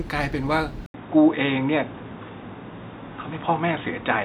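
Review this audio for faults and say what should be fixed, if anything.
At 0.86 s the speech breaks for about 80 ms. From there to the end at 4.24 s, it sounds dull and boxy, with nothing above 3.8 kHz. A faint new background noise appears, far below the speech. The level stays about the same. The input likely switched to a poorer device, such as another microphone or a headset's call profile, which passes a narrower band. To prevent it, lock the input device before recording.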